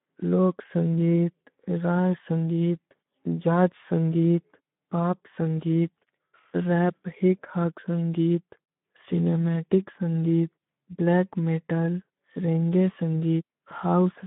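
Speech heard throughout through a Speex codec, with plainly audible coding damage: the excitation is underfed, so the voice sounds noisy and hoarse rather than clean, which fits a bitrate around 11 kbps. The band runs from roughly 150 Hz to 3.6 kHz, as over a narrowband telephone line, and nothing at all sits above 3.8 kHz, so there is no high-band fill and the top end is simply missing.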